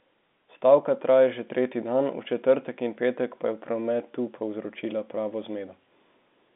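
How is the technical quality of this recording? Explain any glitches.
No glitches can be heard in this speech recording.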